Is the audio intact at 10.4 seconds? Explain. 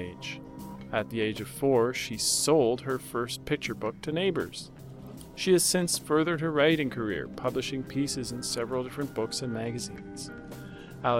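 No. At 10.4 seconds the sound is inside a Bluetooth SBC bit pool drop that runs from 9.40 s to the end of the clip at 11.20 s. The top is dull and a gritty, grainy noise sits under the sound. The link has cut the bits per frame, which fits a bit pool falling from 31 to 15, near 105 kbps. The highest sub-bands get little or nothing, and the remaining bands are coarsely quantised.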